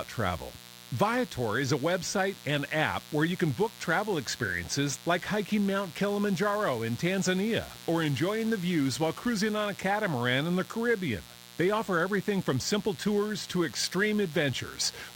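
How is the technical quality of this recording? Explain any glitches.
The recording is marred by mains buzz, present from start to finish under the speech. A switching load or poor shielding let sharp spikes from the 60 Hz supply into the signal path, twice per cycle. Their harmonics stack up into the kilohertz range, producing a steady, raspy buzz sitting roughly 20 dB below the speech.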